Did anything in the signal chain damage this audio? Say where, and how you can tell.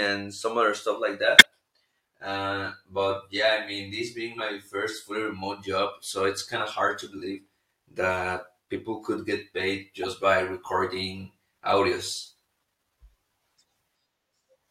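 Yes, codec stage: a corrupt frame decoded, a near-full-scale burst at 1.38–1.45 s and a fainter blip at 10.03–10.05 s. Each covers a couple of bit-damaged frames that were played anyway.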